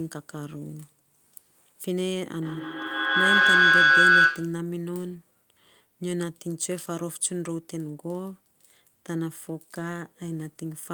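From 2.42 s to 4.71 s the speech is overtaken by feedback howl. Sound from a loudspeaker is reaching a microphone on the same call and being sent back out with more gain on each pass, so the repeats build rather than decay. The loop settles on a tone near 1.5 kHz, pulsing roughly every 150 ms, and peaks at about 12 dB above the speech before the loop is broken and it stops.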